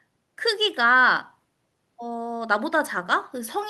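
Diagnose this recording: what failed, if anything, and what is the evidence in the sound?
Nothing stood out on listening to this speech recording, so there is no failed stage to point to.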